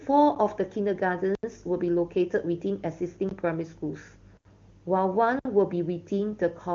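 At 1.35 to 1.43 s, 3.29 to 3.31 s, 4.37 to 4.45 s and 5.39 to 5.45 s the speech drops into blocks of digital silence of 80, 20, 80 and 60 ms, likely where the output buffer went unfilled.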